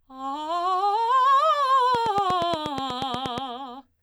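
Music clip with a regular train of clicks from 1.95 to 3.39 s, about 8.4 per second and roughly 15 dB above the music, likely interference; they show as evenly spaced vertical spectrogram lines and sharp waveform spikes.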